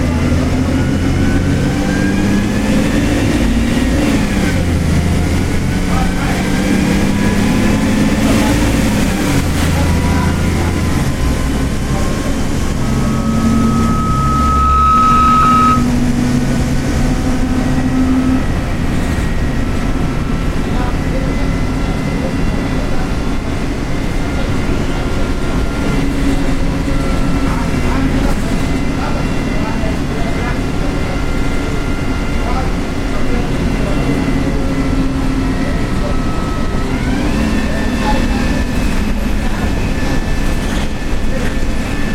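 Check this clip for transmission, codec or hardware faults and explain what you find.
Two kinds of fault show up: a short run of lost LE Audio frames in three places, and a loudspeaker feedback squeal in the middle of the clip.

The lost LE Audio frames come at 3.94 to 3.98 s, 15.43 to 15.45 s, and 37.26 s, lasting 40 ms, 20 ms and 10 ms. That fits four, two and one 10 ms LC3 frames going missing over the Bluetooth link. When frames drop, the decoder fills the gap by replaying the last good spectrum with its phases scrambled. So you don't get silence, just a brief hissy smear where the tonal detail blurs. None of these gaps runs long enough to fade out.

The loudspeaker feedback squeal runs from 12.82 to 15.91 s. The mic is picking up the speaker it feeds, and around 1.3 kHz the loop gain tops one, so that frequency keeps feeding itself. You hear a single tone swell over roughly two seconds and settle at about 5 dB above the rest of the sound before it stops. 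The 15.43 s dropout lands inside the squeal, so the tone briefly turns to noise there too.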